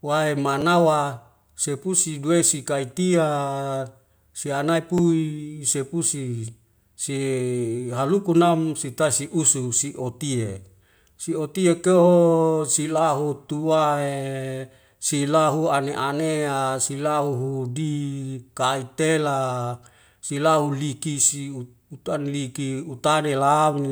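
Repeated buffer faults hit this speech clip: fresh audio arrived late, so the device replayed its last 10.7 ms block, which fits a 512-sample buffer. Single repeats at 0.61 s and 4.98 s give brief clicks. Four repeats from 20.26 to 20.30 s make a short buzzy stutter, losing roughly 40 ms of audio.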